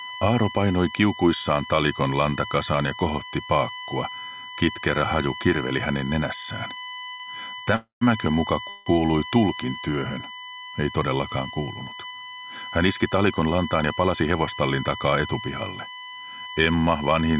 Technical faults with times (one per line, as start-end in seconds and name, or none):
0.00-17.39 USB whine
7.12-7.22 short stall from a late packet
7.76-8.03 call audio freeze
8.69-8.88 call audio freeze
13.06-14.85 jitter buffer speed-up